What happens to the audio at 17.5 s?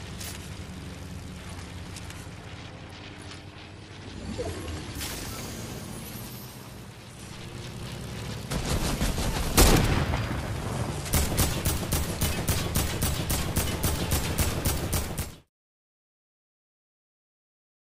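Nothing goes wrong at 17.5 s; the audio is intact at that point.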